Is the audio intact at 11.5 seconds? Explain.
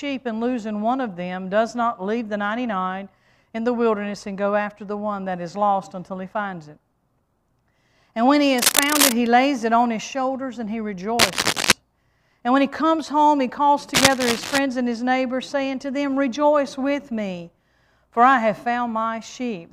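No. Cable scratch noise runs from 11.19 to 11.72 s, a dense, uneven rustling roughly as loud as the sound itself, likely from a worn cable or connector being moved. Unlike isolated clicks, it scratches in dense, uneven bursts.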